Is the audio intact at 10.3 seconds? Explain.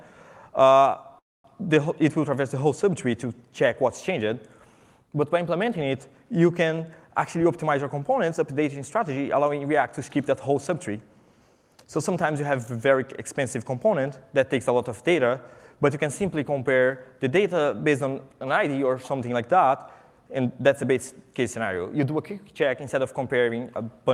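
No. At 10.3 seconds the audio is inside a jitter buffer speed-up that runs from 7.36 to 10.71 s. The jitter buffer had built up more audio than its target, so the receiver shortened it by repeatedly cutting out small segments, each one or a few pitch periods long, totalling about 200 ms. The pitch stays the same, but the sound plays at 106% speed, and at that rate it comes across as hurried.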